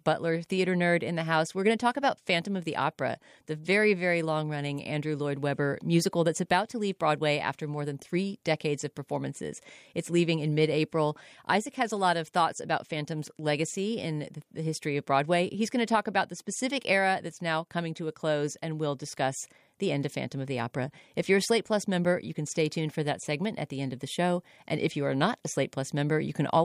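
No technical faults are audible anywhere in the speech recording.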